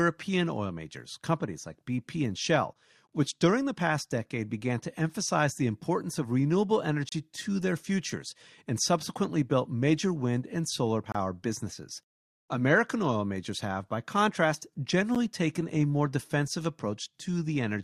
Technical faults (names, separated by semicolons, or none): gap between stream segments